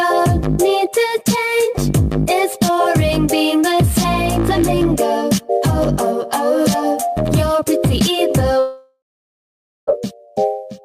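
At 8.59 s the sound breaks off into a buzzing or hissing continuation of its last moment. That tail fades over a few tenths of a second. Then about 0.85 s of silence follows. The audio resumes at 9.89 s, but about 1.28 s of material is simply gone. This is a long network dropout. Incoming audio likely stopped arriving. The receiver stretched the final fragment to cover the gap, then gave up and went quiet.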